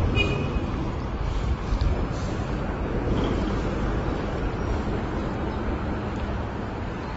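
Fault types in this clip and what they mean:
AAC compression: Present throughout the clip. Nothing is heard above about 7.6 kHz, and the remaining spectrum is plainly damaged: dull, smeared, with a warbly, fizzy grain on sustained and noisy parts of the sound. The likely cause is low-bitrate AAC-LC encoding, whose damage fits roughly 24 kbps. With so few bits, the encoder drops the top of the band and coarsely quantises what is left, leaving holes that turn into swirling artefacts.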